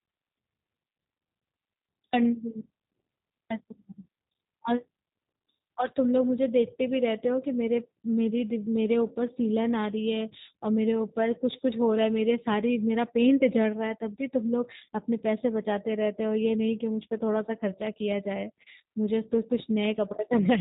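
From start to finish the speech carries G.729 codec damage: the voice is rebuilt from a vocal tract model and sparse pulses, giving a plainly rough, synthetic tone, which fits an 8 kbit/s stream. A spectrogram shows nothing above 4 kHz.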